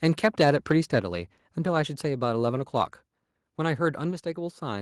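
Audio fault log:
1.02 s and 4.11 s, microphone volume stepped down: the input volume on the microphone was likely cut in single steps by the call software's level control, about 5 dB at 1.02 s and about 3 dB at 4.11 s. Each time, the speech and the background beneath it drop together, instantly, with no fade. The room and the voice keep the same character. Only their loudness falls, stepping down further at the second change.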